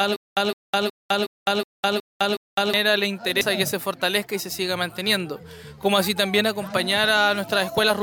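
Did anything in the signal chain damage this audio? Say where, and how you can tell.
Yes. From the very start until about 2.74 s there is a stutter with silent gaps: a short burst of about 162 ms keeps coming back, seven times, at a steady 368 ms period, with roughly 206 ms of dead silence after each. The likely stage is playback or streaming, where the buffer stalls, replays its last fragment on each retry, then runs dry. On a waveform you'd see identical blocks separated by flat silent stretches; on a spectrogram, repeated vertical slabs with blank gaps. The audio that belonged in those gaps is gone.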